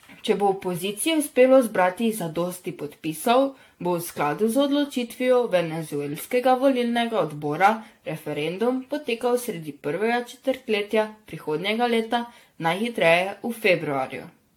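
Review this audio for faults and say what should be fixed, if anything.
Generation loss runs through the whole clip. The speech sounds swirly, smeared and hollow, onsets are blurred, and nothing is present above 18.6 kHz. The likely cause is repeated AAC-LC re-encoding, around seven passes at what sounds like 96 kbit/s. Each pass adds fresh quantisation noise on a shifted frame grid. Keep a lossless master and encode only once, at the final delivery stage.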